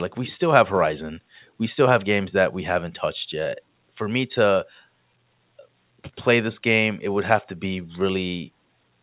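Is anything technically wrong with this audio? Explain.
No, nothing is technically wrong.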